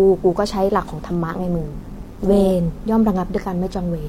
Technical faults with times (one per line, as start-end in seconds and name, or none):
1.29-2.51 overlap-add ripple